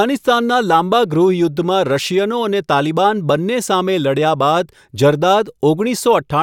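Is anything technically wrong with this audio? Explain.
No, nothing is technically wrong with this audio.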